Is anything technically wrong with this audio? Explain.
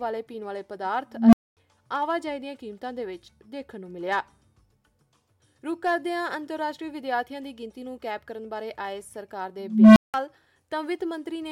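Yes. There are two instances of an unstable filter, at 1.13 to 1.57 s and at 9.60 to 10.14 s. A recursive filter with bad coefficients feeds its output back with gain above one. A low tone around 200 Hz swells over roughly 204 ms and 363 ms respectively, clips, overflows, and drops out for 240 ms and 180 ms. On a waveform, a growing sinusoid clips before flatlining. A spectrogram shows a bright horizontal band near 200 Hz that ends in a blank gap.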